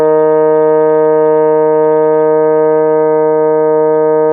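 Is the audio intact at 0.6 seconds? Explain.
Yes, the music plays through 0.6 seconds without any dropout, click, distortion or other audible fault at that point.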